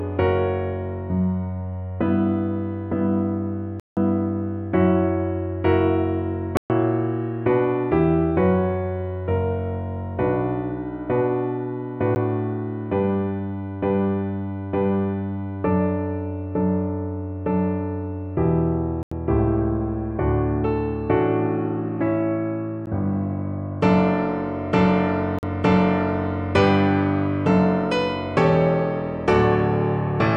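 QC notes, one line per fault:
3.80–3.97 s, block of digital silence: a 171 ms hole, which fits an 8192-sample buffer left unfilled, cutting out and back with no fade.
6.57–6.70 s, block of digital silence: 128 ms dropout, same abrupt cut and return.
12.15 s, block of digital silence: only 12 ms, so it lands as a tick.
19.03–19.12 s, block of digital silence: 85 ms gap, consistent with a 4096-sample block zeroed.
22.86 s, block of digital silence: another 12 ms tick.
25.39–25.43 s, block of digital silence: 43 ms, fitting 2048 samples.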